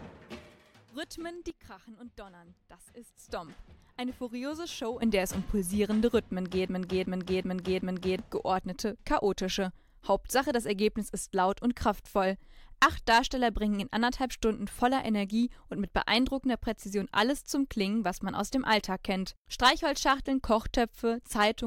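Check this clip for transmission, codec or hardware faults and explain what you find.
Two kinds of fault are audible: sudden gain jumps and a broken-record loop.

Sudden gain jump: At 1.50 s the level falls abruptly by about 9 dB and stays down until 3.18 s, where it snaps back. At 5.02 s it jumps up by about 12 dB and holds there to the end. Each change happens between one sample and the next with no fade, so the sound and its background noise step together. The likely cause is a digital gain setting or bit shift applied without a ramp.

Broken-record loop: From 6.68 s to 8.19 s, a fragment of about 377 ms plays four times back to back, identically each time. The result is a mechanical stutter rather than continuous sound. Whatever should have played during those 1.5 s is missing. The likely cause is a stalled player, encoder or stream that kept resending the last block it held until fresh data arrived.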